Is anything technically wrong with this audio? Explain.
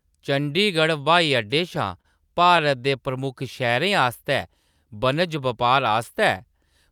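Yes, there is a short stall from a late packet in this speech, from 2.01 to 2.06 s. A packet arrived late, the jitter buffer ran dry, and the receiver stretched the last sound for about 30 ms before resuming exactly where it stopped. The result is a briefly held sound with a slight buzz or dip. Unlike a dropout, nothing is lost; everything after it simply plays 30 ms later.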